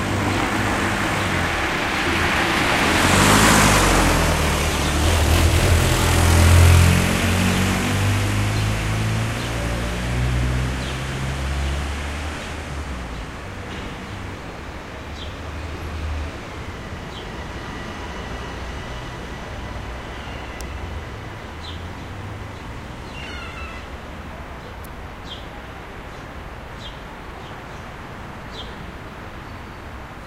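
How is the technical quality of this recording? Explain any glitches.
Two sharp glitches interrupt the recording of everyday sounds, both electrical switching spikes. At 20.61 s a single hard snap sits on top of the sound, peaking at around -10 dBFS, and at 24.85 s a second, quieter tick follows at roughly -20 dBFS. Each lasts only milliseconds. They are likely caused by a nearby switch, motor or static discharge arcing briefly, with the audio line picking up that burst of interference as a click.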